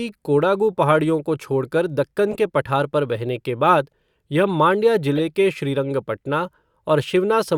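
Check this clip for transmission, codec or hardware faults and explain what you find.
Two codec faults are present. A corrupt frame was decoded from 2.31 to 2.37 s, after "पहाड़ियों को छोड़कर दक्कन" and before "के पठार", and again from 5.16 to 5.20 s, just before "के श्रीरंगपटना". Each time, damaged bits across a couple of frames were decoded anyway, producing a brief burst of misplaced energy peaking around -15 dBFS.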